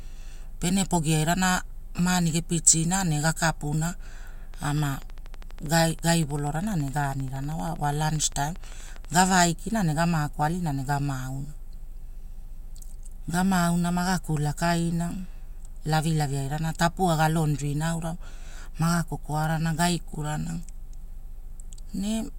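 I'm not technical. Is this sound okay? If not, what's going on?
No. From 4.54 to 9.30 seconds there is a train of clicks: a steady ticking, about 12 clicks every second, some 70 in all, roughly as loud as the speech itself. They keep their even pace and carry on through the pauses, which sets them apart from random crackle or a one-off pop. Something is likely injecting a pulse repeatedly, such as electrical interference from nearby equipment or a faulty connection or power supply.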